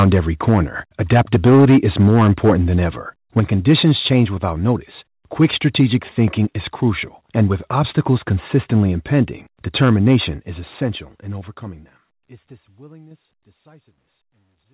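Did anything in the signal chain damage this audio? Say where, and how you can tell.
Yes. Microphone overload occurs at 0.00–0.59, 1.12–2.53, 3.37–4.22, 5.41–6.25, 7.39–7.42 and 9.75–10.16 s, the last just before "is essential in overcoming". Peaks run up to about 8 dB past the converter's limit, and their flattened tops crackle harshly. The likely cause is input gain driving the converter into clipping.

Microphone volume stepped down at 0.04 s by about 4 dB and at 3.4 s, just after "than ever", by about 5 dB. Voice and background drop together in a single step, each time inside an overloaded stretch. This is likely call processing cutting the device input gain in response.

Microphone volume stepped up at 13.11 s by about 5 dB. Speech and background jump up together, which shows call-side gain control raising the device input volume of a quiet microphone. The step sits under the narrowband G.711 call path, with nothing above 4 kHz, and under the closing fade.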